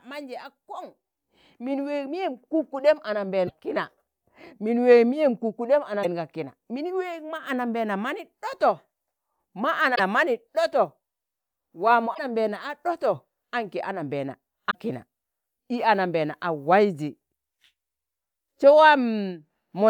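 Damaged data in a compressed stream at 3.44–3.51, 6.00–6.05, 9.92–10.00, 12.11–12.19 and 14.67–14.75 s: corrupted frames make the decoder misread and resynchronise, producing brief chirps or squawks in the speech.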